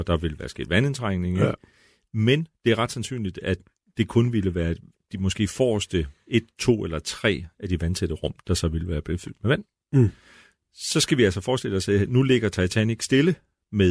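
No faults detected anywhere in this speech recording.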